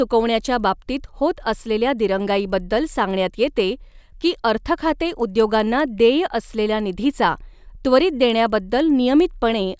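Throughout the speech, a resampler restarted on every block converts 24 kHz to 16 kHz in isolated 100 ms chunks, leaving an error at each edge. Faint ticks repeat at 10 Hz during sound, appearing as thin vertical lines every 100 ms on a spectrogram and small waveform discontinuities.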